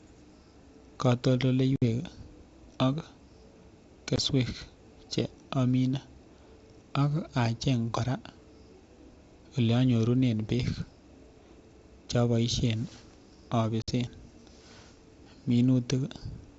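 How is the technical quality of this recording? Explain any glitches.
The recording is G.722 wideband speech marked by three dropouts from packet loss on an ADPCM call, at 1.76–1.83 s (60 ms), 4.16–4.18 s (20 ms) and 13.82–13.92 s (60 ms). Each is a hard-edged silent gap consistent with one to three lost packets. Afterwards the decoder's predictor and step size disagree with the sender's, so speech resumes with a brief level jump, click or distortion.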